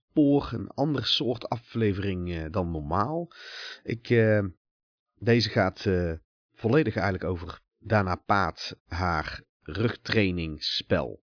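No technical faults can be heard anywhere in this speech recording.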